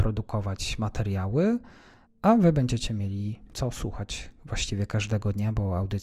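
Nothing in this bit of speech stands out as a technical fault, so there's nothing to point to anywhere along the way.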